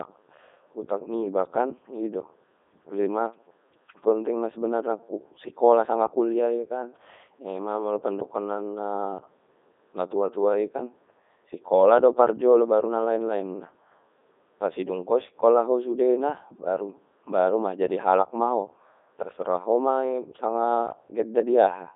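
Codec 2 vocoder damage runs from start to finish: the speech is rebuilt from sine waves using only pitch, voicing, energy and a spectral envelope, which fits the 3.2 kbit/s mode. It sounds heavily robotic and buzzy, confined to roughly 250 Hz to 3.7 kHz, with nothing above 3.8 kHz.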